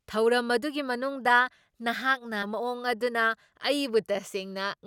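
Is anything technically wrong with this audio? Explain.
Yes. From 2.42 to 2.46 s, the speech jumps abruptly ahead with a brief blip. The likely cause is a stream segment skipped after failing to load.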